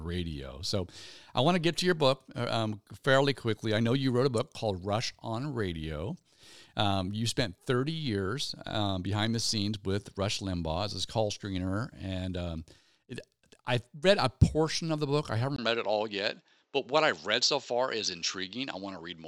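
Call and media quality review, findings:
Input switched to a poorer device at 15.56 s, after "of the book I", through to the end. Brief 20 ms dropout, then the band stops near 7.7 kHz. New noise floor roughly 50 dB down, level steady. Likely capture device change.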